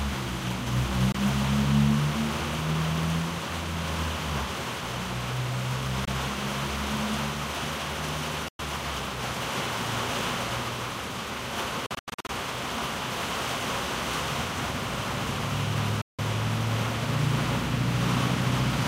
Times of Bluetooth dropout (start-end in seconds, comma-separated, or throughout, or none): 1.12-1.15, 6.05-6.08, 8.48-8.59, 11.86-12.29, 16.01-16.19